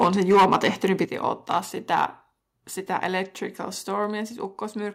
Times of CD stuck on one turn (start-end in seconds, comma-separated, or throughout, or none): none